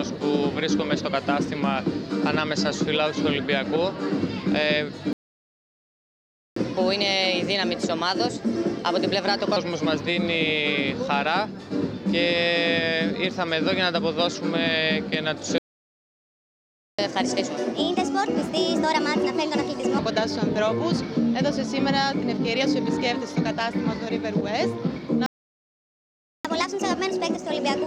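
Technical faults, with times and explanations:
5.13–6.56 s: playback stall, the sound just drops out for about 1.4 s mid-flow, most likely the player starving for data or its thread getting blocked.
6.56–9.56 s: catch-up at higher speed, everything runs 1.15 times fast for three seconds, pitch up roughly two semitones, as the backlog gets played off.
15.58–16.99 s: playback stall, another silent gap of about 1.4 s, again likely the buffer running dry before output resumes.
16.99–19.99 s: catch-up at higher speed, now 1.25 times fast, pitch up about four semitones, clawing back the lost time before settling to normal.
25.26–26.45 s: playback stall, a shorter dropout of about 1.2 s, the same likely underrun pattern cutting the sound off.
26.45 s to the end: catch-up at higher speed, 1.25 times fast and about four semitones sharp, still racing through the backlog when the clip ends.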